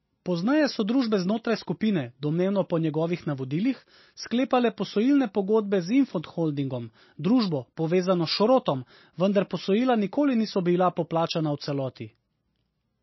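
From start to finish the speech carries plainly audible damage that points to MP3 compression, likely at a low bitrate around 26 kbps. Short of bits, the encoder has cut everything above 5.8 kHz and dropped weak frequency lines that flicker on and off between frames, so s sounds turn swirly and metallic and consonant onsets smear. A spectrogram shows a flat ceiling at 5.8 kHz with speckled, blotchy gaps beneath it.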